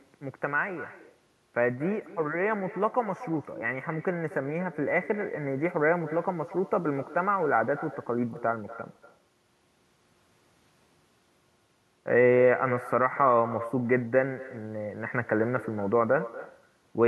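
Throughout the speech, an echo with no canceller trails every phrase: a quieter copy, about 16 dB down, returns roughly a fifth of a second later, thin after looping through a far-end loudspeaker and microphone. Unlike room reverberation, it repeats as a distinct delayed copy rather than a smooth decay.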